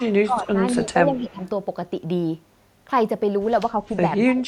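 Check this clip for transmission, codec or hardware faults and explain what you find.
Two faults recur through the opening second and a half and again near the end: an echo leak and speech suppressed in double talk.

Echo leak appears at 0.00 to 0.08 s, 0.80 to 0.85 s and 1.15 to 1.49 s. A faint delayed copy of the speech trails the original by about 218 ms, sitting roughly 20 to 25 dB below it. The likely cause is a far-end loudspeaker feeding its microphone while the echo canceller fails to subtract all of it, so residue returns down the line as brief ghosts.

Speech suppressed in double talk occurs at 0.28 to 0.63 s, 0.83 to 1.41 s, 3.71 to 3.96 s and 4.23 s to the end. The speech dips noticeably, by around 15 dB at its deepest, less in the 0.83 s and 3.71 s stretches, and sounds ducked or partly clipped away. This is likely an echo canceller confused by both sides talking at once, attenuating the wanted talker along with the echo it was trying to remove.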